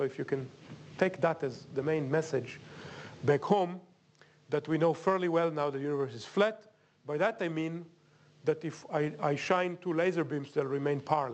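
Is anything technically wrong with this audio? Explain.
No, nothing here is technically wrong.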